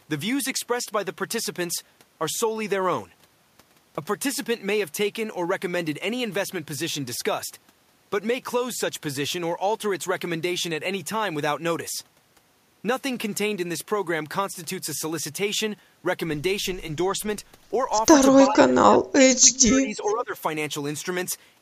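Speech suppressed in double talk, from 18.46 to 20.4 s: the speech sinks and breaks up in patches adding up to about a second and a half, with the deepest dip around 25 dB down. This is likely an echo canceller that heard both ends talking at once, could not tell the near talker from its own loudspeaker's echo, and turned the whole signal down to be safe.

Echo leak, from 20.05 to 20.14 s: a brief, faint ghost of the speech appears, lagging the original by 411 ms and sitting roughly 25 dB below it, short and scrappy. One end was likely playing the call over a loudspeaker, and its canceller failed to strip all of that sound from its microphone, so a fragment was sent back down the line.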